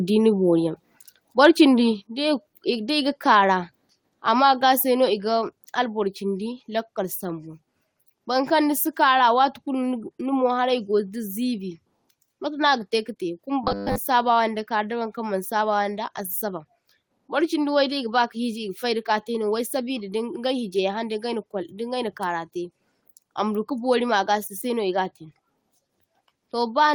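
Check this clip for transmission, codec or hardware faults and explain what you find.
One fault stands out: robotic sound from repeated short buffers, from 13.64 to 13.98 s. The speech turns into a rigid, metallic buzz at 100 Hz that still loosely tracks the syllables. A likely cause is audio arriving too seldom, so playback keeps looping the last 10 ms segment while most of the real audio in that stretch is skipped. Unlike codec warble or a dropout, the buzz holds one fixed pitch regardless of the talker's intonation.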